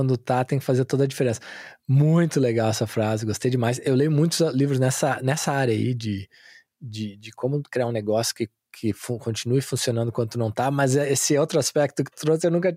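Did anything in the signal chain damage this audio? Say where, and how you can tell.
No, there's no sign of damage at any stage of the chain in this speech recording.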